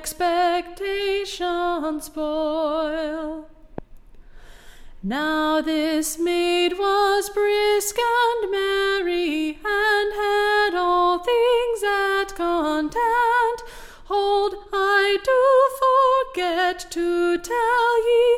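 A single sharp pop cuts through the sound at 3.78 to 3.80 s, peaking roughly 10 dB above the surrounding level while the sound carries on beneath it. This loud pop is likely a sudden voltage spike, such as from a switch, static discharge or driver glitch, entering the signal path.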